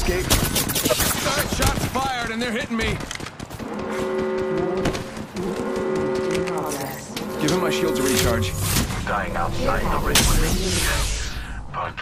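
From 0.71 s to 11.93 s, clicks recur every 0.66 s. These are likely clock drift buffer slips, as mismatched clocks drop or repeat a few samples.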